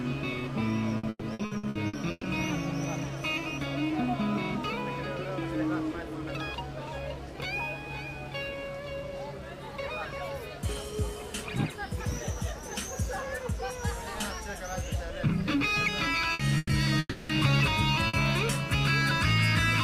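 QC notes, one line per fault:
0.97–2.26 s, repeated packet loss (robotic sound): eight separate holes in about 1.3 s, the longest about 120 ms, roughly half the stretch patched over. Each gap gets filled by stretching the last bit of sound, so it comes out choppy, with pieces missing.
16.33 s, 16.57–16.72 s and 18.07–18.16 s, burst of packet loss: short runs of lost packets, 60 ms, 120 ms and 60 ms. The receiver keeps the last sound going and fades it, so you get a brief held buzz or hiss, then the audio picks up further along with that piece gone.
16.99–17.32 s, long network dropout: about 300 ms of audio never shows up, likely a network stall. The concealment carries the last sound forward as a fading buzz or hiss for most of it, leaving a sliver of silence before the sound returns further on, minus what was lost.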